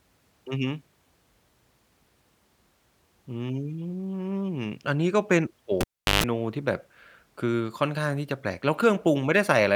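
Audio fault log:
5.81 to 6.24 s, cable pulled and plugged in: a live lead gets yanked and shoved back in during this speech. You hear a pop as it comes out, then close to 380 ms with nothing fully connected, mostly near silence but including about 140 ms of 50 Hz mains buzz while only the plug tip is touching and the shield isn't grounded yet. A second pop lands as the plug seats fully and the audio comes back.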